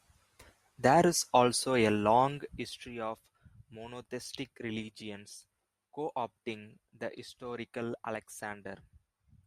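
No technical faults can be heard anywhere in the speech.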